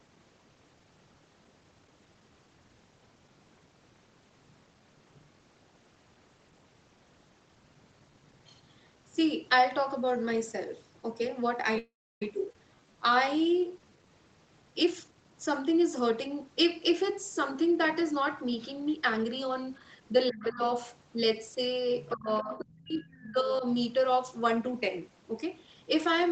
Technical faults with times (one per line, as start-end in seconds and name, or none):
11.78-12.22 call audio freeze
12.52-12.55 skip ahead
12.75-14.10 jitter buffer slow-down
14.83-20.12 jitter buffer speed-up
20.29-20.63 speech suppressed in double talk
22.09-22.57 other side's voice leaking through
22.14-23.64 speech suppressed in double talk